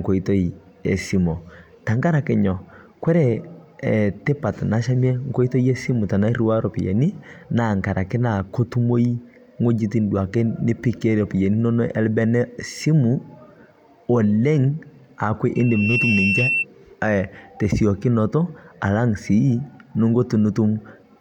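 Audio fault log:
15.55 to 16.65 s, loudspeaker feedback squeal: the microphone picked up its own loudspeaker and the loop gain passed unity at 2.7 kHz, so that single tone fed itself, swelling over roughly 0.4 s into a piercing squeal about as loud as the speech before cutting off.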